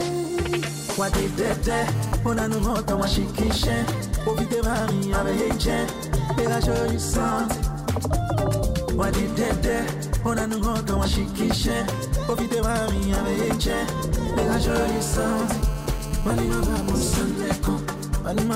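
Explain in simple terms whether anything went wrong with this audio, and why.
A nearby mobile phone caused GSM phone buzz twice: from 1.95 to 2.64 s, and again from 14.64 to 17.22 s. The phone sends radio pulses 217 times a second. The audio circuit picks them up and turns them into a harsh, raspy buzz.

Then GSM signalling bursts follow, from 17.31 to 18.49 s. A nearby phone sent only brief groups of pulses, as happens during a call while the person on it is silent. This sounds like even ticks with a longer buzz twice a second.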